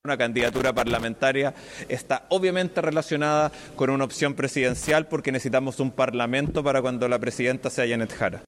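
From 0.39 to 1.04 s, and again briefly from 4.82 to 4.91 s, the audio breaks into loose connector crackle. A worn or dirty contact is making and breaking as it shifts, chopping the signal on and off. The result is an irregular scratchy burst. Unlike steady surface crackle or evenly spaced digital clicks, it arrives in short clusters with uneven spacing.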